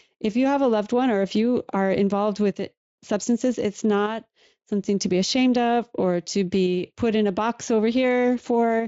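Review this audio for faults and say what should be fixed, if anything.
No faults turned up in the review, so nothing needs to be fixed.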